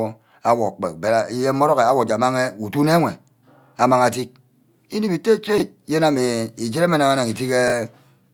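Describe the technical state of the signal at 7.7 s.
A brief jumbled stutter sits between 7.68 and 7.72 s: chunks out of order. One 20 ms block of the speech plays one chunk late, after the block that should follow it, so nothing is missing but the sequence is swapped, leaving three abrupt joins.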